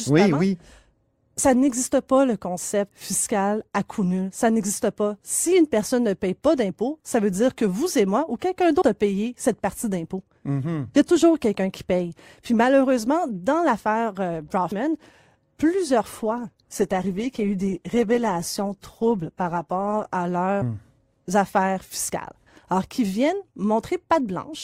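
From 16.14 to 20.14 s the adaptive stream dropped to a lower bitrate as the connection slowed, and the sound points to roughly 64 falling to 16 kbit/s. The speech abruptly takes on more codec artefacts, with no gap, until full quality returns just before "à leurs".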